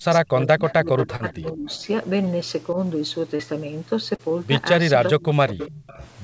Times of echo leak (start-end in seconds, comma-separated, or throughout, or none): 0.67-1.35, 1.70-1.81, 5.20-6.08